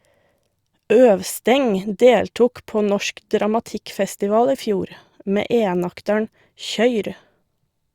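No dropouts, clicks, distortion or other technical faults are audible anywhere in the speech recording.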